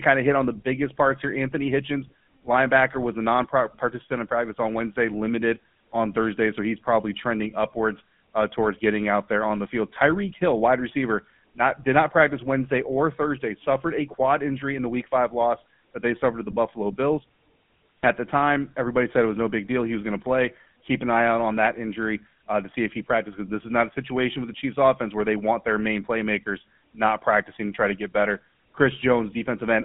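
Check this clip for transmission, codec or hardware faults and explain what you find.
The speech has one fault, present throughout: the GSM full-rate codec. It rebuilds the voice from a vocal-tract model driven by sparse regular pulses, which fits the 13 kbps full-rate coder. The result is plainly buzzy and gravelly. The band spans 150 Hz to 3.4 kHz, with nothing above 3.6 kHz.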